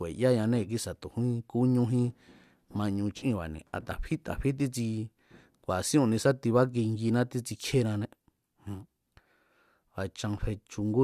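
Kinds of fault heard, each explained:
No technical faults are audible in this recording.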